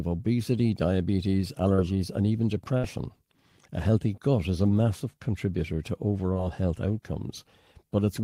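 At 2.77 to 2.85 s, after "and even", a burst of packet loss: about 60 ms of audio is lost, replaced by a fading held continuation before a skip. At 6.33 to 6.37 s, after "a massive contributor to", a short concealed packet loss fills roughly 20 ms, heard as a brief smear.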